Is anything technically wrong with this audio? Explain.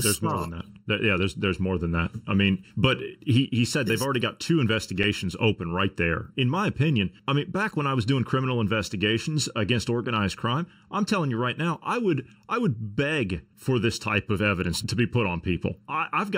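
Yes, there are two faults.

Throughout the recording there is channel delay causing comb filtering. One channel arrives roughly 0.7 ms behind the other, and summing them to mono cancels the shared content at evenly spaced frequencies, with the first notch near 700 Hz and further notches above it. The speech sounds hollow and phasey. On a spectrogram this appears as fixed dark horizontal bands that stay put as the voice moves. The waveform shows nothing obvious.

At 5.03 s, between "they've already got two" and "open right there", there is a block of digital silence lasting 5.8 ms, consistent with a 256-sample buffer that wasn't filled in time. The signal drops to zero and returns with no fade, and the result is heard as a single tick. The waveform shows a flat line. The spectrogram shows a thin vertical gap.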